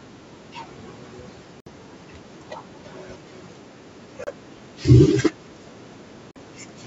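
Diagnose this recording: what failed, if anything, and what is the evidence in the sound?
Three short holes cut the speech at 1.60 to 1.68 s, 4.24 to 4.28 s and 6.31 to 6.37 s, lasting about 60, 30 and 45 ms. The speech resumes later as though it had kept running. A waveform shows flat gaps. A spectrogram shows blank vertical bands, capped at the 8 kHz top of the call microphone processing. The stage is likely the wireless link. In a Bluetooth dropout, late packets are discarded, and these gaps fit two to four lost frames.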